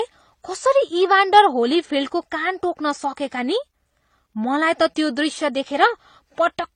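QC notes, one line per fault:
Throughout, transcoding between lossy codecs: the speech has nothing above 10 kHz, and two kinds of coding damage sit on top of each other. There's a smeared, swirly smear from plain AAC, then a second layer of the metallic, synthetic top end that spectral band replication gives HE-AAC. It's likely an AAC-LC encode at a low rate, around 32 kbit/s, re-encoded to HE-AAC at a similar rate. The second pass wastes bits on the first pass's artefacts and adds its own.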